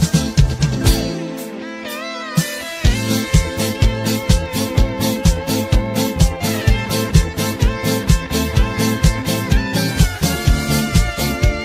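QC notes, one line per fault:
Throughout, block size mismatch (truncated): one processing stage hands over longer blocks than the following stage reads, so the tail of every block is dropped before it reaches the output. Each cut leaves a small discontinuity, and because the cuts recur at a steady 100 Hz they fuse into a constant buzz under the audio. So little is discarded per block that the sound plays at effectively 1.0x speed, with its pitch unchanged.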